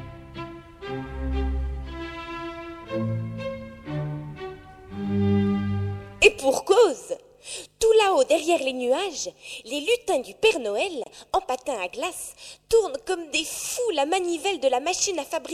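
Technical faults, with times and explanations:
11.04 to 11.06 s, gap at a join of encoded pieces: a 26 ms silence from untrimmed encoder delay and padding, with softened edges; unlike a dropout, the sound resumes exactly where it stopped.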